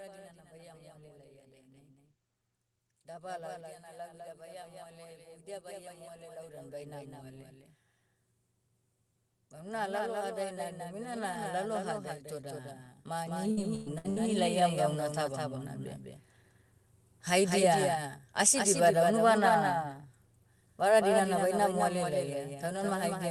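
Speech throughout carries a doubled audio track: a full-band copy about 5 dB quieter trails by roughly a fifth of a second, likely from a second capture path, and shows as a shifted ghost of every waveform burst. After "vara dinana", automatic gain rising lifts voice and background together by 12 dB from 0.5 to 7.81 s, and again from 9.52 to 15.77 s, visible as a steadily widening waveform envelope. Inside that second rise, repeated packet loss (robotic sound) between 13.51 and 14.19 s leaves four holes, the longest 111 ms, patched with stretched continuations; the spectrogram shows smeared, frozen harmonics broken by brief gaps. Spectral energy ends near 12 kHz throughout, consistent with the Opus call path.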